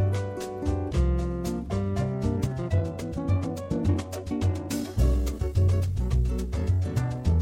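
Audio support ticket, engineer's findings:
Time-stretched section, 2.34 s to end of clip: pace jumps to about 1.84x while pitch holds, sounding rushed. Likely a time-stretch algorithm dropping short segments to shorten the audio. Spectrogram shows unchanged harmonic spacing, compressed events and regular splice seams in the waveform.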